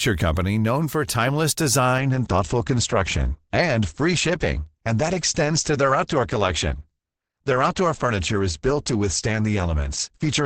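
Adaptive stream at a lower bitrate, from 1.98 s to the end: right after "company known for timeless", the quality falls abruptly with no gap, as the stream switches to a cheaper encoding once the connection slows. From then on nothing sits above about 8.6 kHz, so the treble is gone and the speech sounds duller, with more codec artefacts. This fits a drop from roughly 64 kbit/s to 16 kbit/s Opus.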